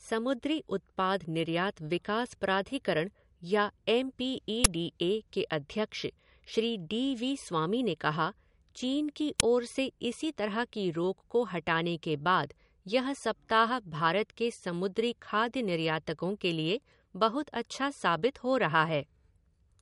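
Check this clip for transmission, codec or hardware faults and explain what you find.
Two kinds of fault are present: a band-limited, double-encoded sound through the whole clip, and two brief bursts of digital noise.

Low-bitrate audio saved at a high bitrate: throughout, nothing reaches above 11.2 kHz, with a dull, swirly MP3 character. The cause is likely a low-bitrate MP3, around 50 kbit/s, re-encoded at a high bitrate, which keeps the earlier losses. A spectrogram shows a flat ceiling at 11.2 kHz.

Uninitialised buffer: at 4.64 s, just before "डी ए के", and at 9.40 s, between "चीन की" and "ओर से इसी तरह", a block played before any audio was written to it, so leftover memory came out as a loud, harsh click of noise. The burst lengths fit 512-sample and 256-sample buffers. The waveform shows sudden spikes.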